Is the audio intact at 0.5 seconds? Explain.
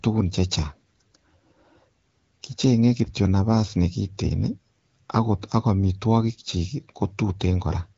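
Yes, the audio is intact at 0.5 seconds, with no fault at that moment beyond the ordinary band limit of the AMR wideband (HD Voice) codec it passes through.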